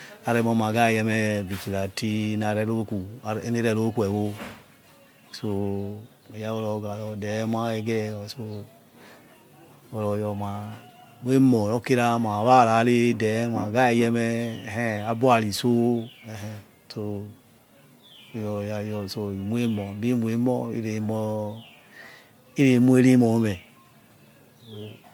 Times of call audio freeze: none

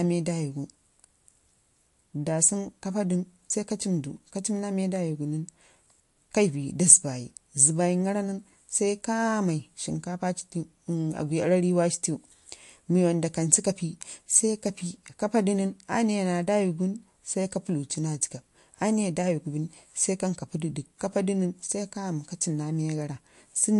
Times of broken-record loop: none

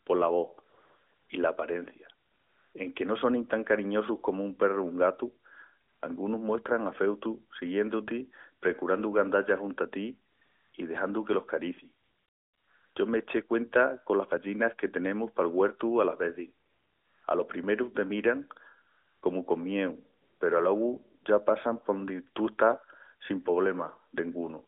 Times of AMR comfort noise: 0.70-1.30, 2.26-2.74, 5.88-6.02, 10.32-10.74, 12.04-12.96, 16.66-17.24, 18.90-19.22, 20.22-20.40, 21.24

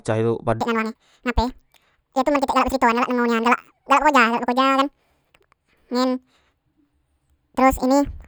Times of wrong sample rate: 0.61-8.27

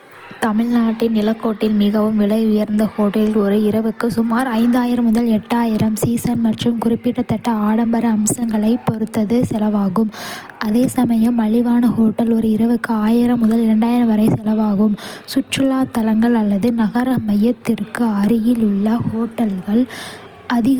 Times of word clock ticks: none

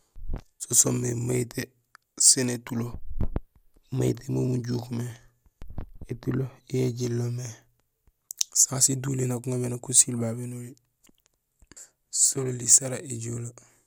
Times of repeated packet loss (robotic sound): none

